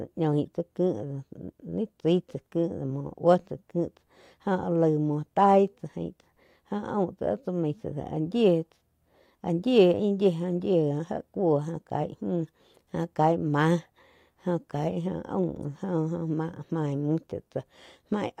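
No technical faults are audible.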